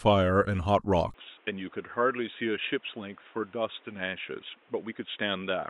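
The recording's input likely switched to a poorer device at 1.14 s, with no gap at the switch, and the speech stays on that narrower path to the end. From that point nothing reaches above 3.8 kHz, so the voice turns dull and boxy. It also drops roughly 5 dB in level, and new background noise appears, sitting around 30 dB below the speech, which marks the change of input from 1.14 s onward.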